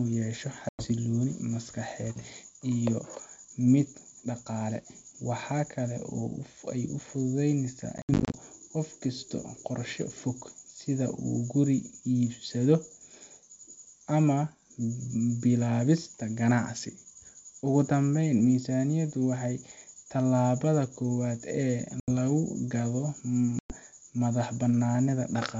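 Packet loss on an ADPCM call cuts hard-edged silent holes into the speech at 0.69–0.88 s (100 ms lost), 7.98–8.35 s (190 ms scattered across 360 ms, longest gap 70 ms), 22.00–22.09 s (80 ms) and 23.59–23.76 s (110 ms). The missing packets leave the decoder's adaptive predictor and step size out of step with the sender's, so after each gap the speech resumes with brief, slight distortion before settling.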